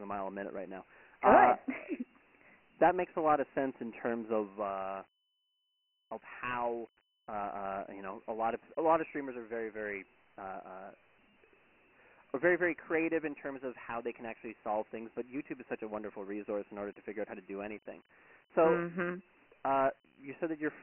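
Dialogic VOX ADPCM damage runs through the whole speech clip: nothing survives above 3 kHz, which fits 4-bit ADPCM at 6,000 samples a second, inside a 250 Hz to 3.5 kHz phone band. The coarse step coding leaves heavy gritty hiss trailing the speech.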